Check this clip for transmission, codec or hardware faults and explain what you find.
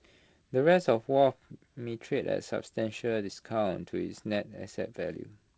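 No faults found in this speech clip.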